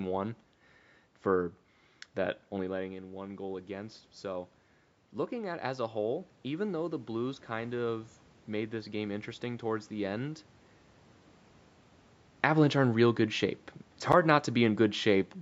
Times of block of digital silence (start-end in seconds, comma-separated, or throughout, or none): 14.12